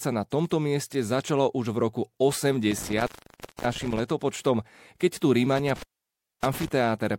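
At 2.71 s the speech drops out in an intermittent contact fault, where a loose plug or cable briefly opens. It crackles at the edges, leaving faint hiss for about 0.57 s, until 4.0 s. It recurs after "keď tu" from 5.58 to 6.68 s, open about 0.6 s.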